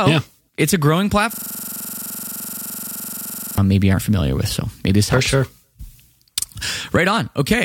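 After "yeah it's a growing", from 1.34 to 3.58 s, a system hang loop repeats one 42.7 ms fragment at 23.4 Hz as a rattling buzz. The system froze while hardware replayed what fits a 2048-sample buffer. Sound returns at "maybe aren't familiar with".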